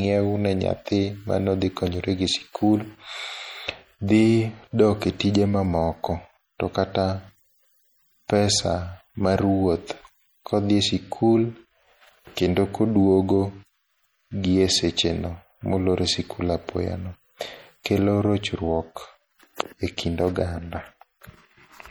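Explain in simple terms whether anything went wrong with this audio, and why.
Something did go wrong, and it lasts from the first second to the last. The speech has a watery, swirly quality, the s sounds come out as metallic chirps, and sharp consonants blur. That points to MP3 compression, most likely squeezed too hard. The encoder saved space by discarding faint detail that flickers in and out. A plain muffling filter would only dull the sound; it wouldn't add that bubbling, shifting texture.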